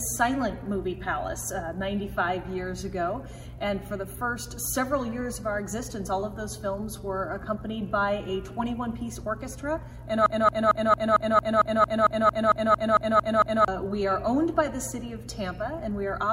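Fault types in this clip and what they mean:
Broken-record loop: the player or stream likely stalled and kept resending the last fragment it held, so a 226 ms piece repeats exactly, back to back, 15 times from 10.26 to 13.68 s, and the audio meant for that stretch is lost.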